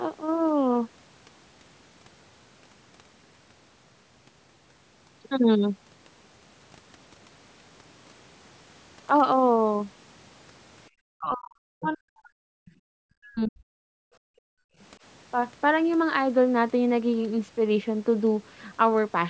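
From 11.13 to 12.55 s the speech dips, by roughly 40 dB at its deepest. This is speech suppressed in double talk. The echo canceller likely could not tell the near talker from loudspeaker echo while both sides spoke, so it attenuated everything. Inside that stretch, from 11.82 to 11.92 s, the other side's voice leaks through, a brief scrap about 15 dB below the speech. It likely comes from loudspeaker playback that the canceller left partly uncancelled. A fainter leak follows at 12.65–12.72 s, about 30 dB down. The same double-talk suppression returns at 12.98–13.72 s with a similarly deep cut, and again briefly at 14.49–14.59 s. Between those, at 14.00–14.21 s, the background is gated by the echo canceller. The room sound falls by about 36 dB for roughly a fifth of a second while the canceller clamps the microphone, then recovers.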